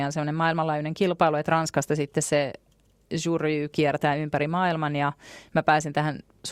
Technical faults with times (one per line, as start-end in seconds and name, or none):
none